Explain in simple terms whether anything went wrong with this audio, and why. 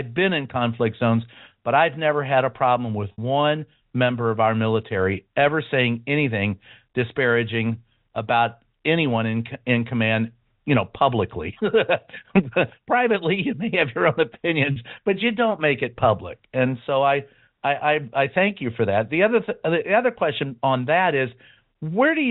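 Packet loss with pitch repetition, at 3.12 s after "had a problem with" and 14.72 s after "may have your own". Chunks of audio went missing, 60 ms then 40 ms, and the receiver filled each gap by repeating the last voice cycle, which sounds briefly held and buzzy.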